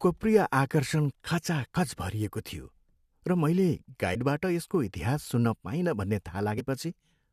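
Compressed frames skipped at 1.75 s, 4.14 to 4.17 s, 5.42 to 5.45 s and 6.57 to 6.61 s: whole coded frames went unplayed, so the speech jumps ahead about 40 ms each time.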